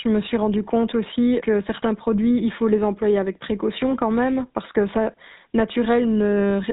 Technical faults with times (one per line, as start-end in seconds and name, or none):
0.00-6.73 GSM full-rate codec